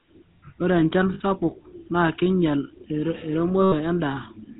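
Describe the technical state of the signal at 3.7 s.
At 3.7 s you're inside a burst of lost GSM frames, 3.62 to 3.73 s, roughly 100 ms. That fits about five 20 ms frames. The decoder keeps replaying the last good frame's settings, so the speech smears into a rough, metallic ring. Underneath, the GSM full-rate codec is doing plainly audible damage: pulse-driven vocal-tract modelling at 13 kbps, nothing above 4 kHz, and a buzzy, gravelly edge.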